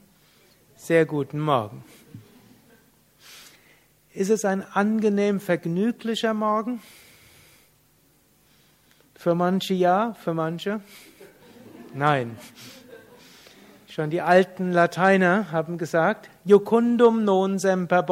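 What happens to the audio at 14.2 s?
Nothing goes wrong at 14.2 s; the audio is intact at that point.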